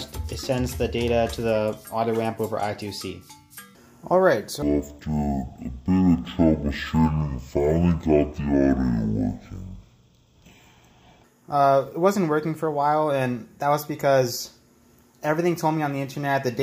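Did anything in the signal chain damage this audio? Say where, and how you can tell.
Yes. Between 4.62 and 11.24 s the sound drops to half speed and a full octave lower, which is the classic stereo read as mono fault at the sample-format conversion stage. Something took interleaved left/right samples and treated them as one channel, so each stereo frame becomes two consecutive mono samples. That doubles the length and halves every frequency. You'd also expect a faint mirrored copy up in the top half of the spectrum through that stretch.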